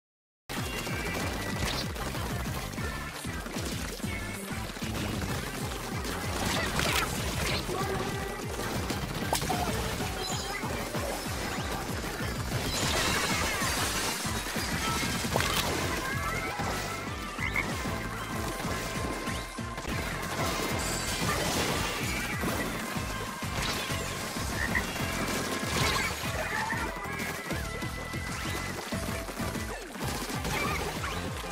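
The audio opens with a cut-off start: digital silence runs from 0.0 to about 0.5 s, then the sound begins abruptly at 0.50 s, already in progress. Capture evidently began late, so there is no natural attack or fade-in.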